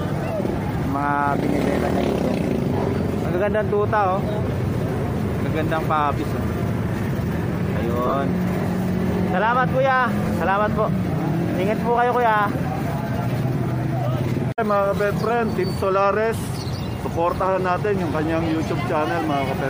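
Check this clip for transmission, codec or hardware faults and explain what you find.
There are lost LE Audio frames at 6.19 s, 8.07 to 8.13 s, 10.25 s, 13.39 s and 16.41 to 16.43 s. The Bluetooth link dropped frames, and the LC3 decoder filled each gap by reusing the last spectrum with random signs, which turns tones into brief noisy smears. The worst loss, around 8.1 s, is scattered gaps with the longest run about 30 ms. The shortest gaps fit single 7.5 ms frames.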